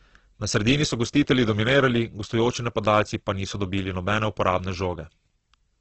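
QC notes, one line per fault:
Throughout: Opus compression. The speech sounds grainy and rough, with a noisy, hissing texture where tonal detail should be, and nothing above about 8.1 kHz, so the top end is dull and boxed in. Heavy damage like this, with bands filled by noise or copied from lower ones instead of left as holes, is likely the music-mode Opus encoder running out of bits, which fits a very low rate around 12 kbps restricted to wideband.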